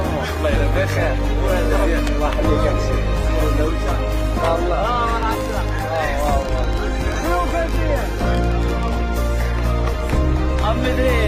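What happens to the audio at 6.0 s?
A rapid, uneven ticking sits over the audio at 6.0 s, part of a train of clicks from 5.23 to 8.89 s: about 40 similar pulses, roughly 11.5 per second and peaking about 5 dB above the sound, likely from electrical interference or a faulty connection or power supply.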